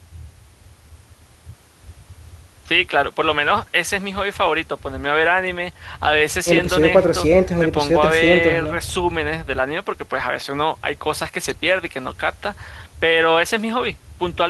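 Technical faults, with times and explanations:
No technical faults can be heard in this speech recording. Nothing in the sound calls for a time or an explanation.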